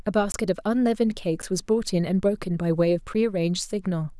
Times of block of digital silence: 0.32-0.34, 1.42, 3.14

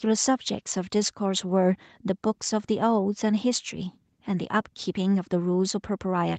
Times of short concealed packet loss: none

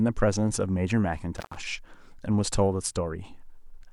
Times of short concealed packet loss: none

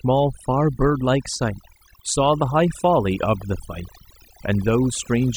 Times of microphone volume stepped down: none

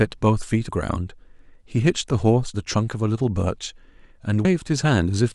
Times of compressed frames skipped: 0.68, 2.53, 4.44

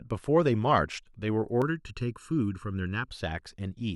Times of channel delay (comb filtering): 1.62-3.10

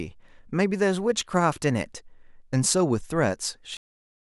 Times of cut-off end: 3.77-4.24

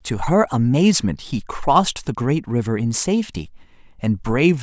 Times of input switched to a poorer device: none

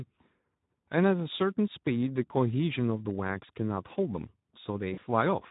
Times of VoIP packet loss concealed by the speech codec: 4.93-4.99

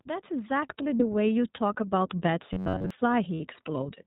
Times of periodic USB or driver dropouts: none

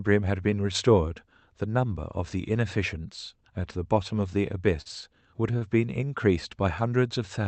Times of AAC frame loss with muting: none

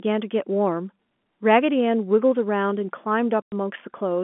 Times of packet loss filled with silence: 3.42-3.52

